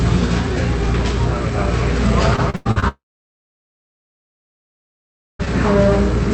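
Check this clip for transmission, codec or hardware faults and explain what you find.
Two transmission faults are audible, both from the network side of an Opus call path whose audio stops at about 8 kHz.

From 2.36 to 2.84 s there is repeated packet loss with a robotic sound: the audio turns choppy and robotic. Five gaps, the longest 98 ms, were each patched by stretching the preceding sound, so nearly half of this span is synthetic.

From 2.88 to 5.41 s the audio briefly buzzes out, then goes silent for about 2.4 s before returning with that stretch missing. The cause is likely a long network dropout, with concealment fading to silence.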